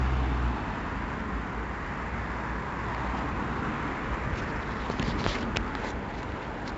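A recording of sounds passed through heavy 4-bit ADPCM compression, consistent with about 64 kbps, leaving level-following gritty hiss, smeared attacks, and nothing above 7.8 kHz.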